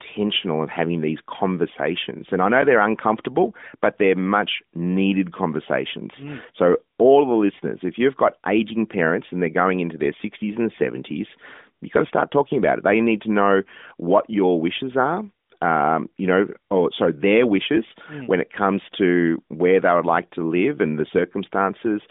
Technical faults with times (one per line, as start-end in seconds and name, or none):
none